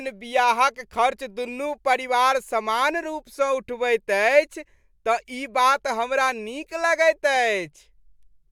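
No technical faults can be heard anywhere in the recording, which holds steady and continuous throughout.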